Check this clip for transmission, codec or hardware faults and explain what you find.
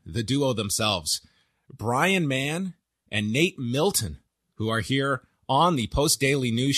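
No faults can be heard anywhere in the speech.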